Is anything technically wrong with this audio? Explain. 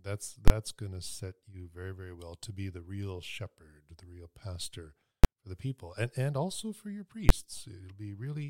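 Yes, there are three loud bangs from invalid numbers at full scale in this speech. The first runs from 0.48 to 0.50 s, about 23 ms, which fits a 1024-sample block. The others hit at 5.24 s and 7.29 s, each around 12 ms, which fits 512-sample blocks. A calculation went infinite or invalid, and those values got pinned to the largest positive or negative value, so the output sits flat at one extreme, far beyond the speech peaks, for the whole block. Because the blocks are so short, each one lands as a single sharp bang rather than a pop-silence-pop.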